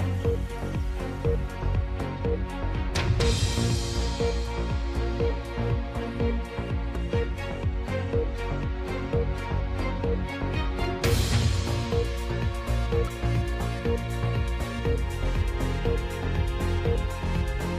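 At 6.95 s and again at 13.08 s, compressed frames are skipped. Whole frames never reach the output, so the sound leaps forward by roughly 70 ms. Unlike a dropout, no silent gap is left; the audio simply jumps ahead.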